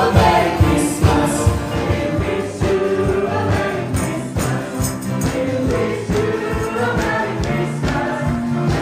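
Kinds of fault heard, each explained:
Nothing here sounds off, so there's no fault to point to in this one.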